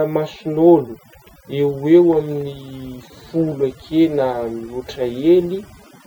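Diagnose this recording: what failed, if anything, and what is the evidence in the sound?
The background drops and breaks up into twinkling specks throughout. This is overdone noise removal at the processing stage: the suppressor pushes individual frequency bands near its noise estimate far down, taking quieter speech components along with them.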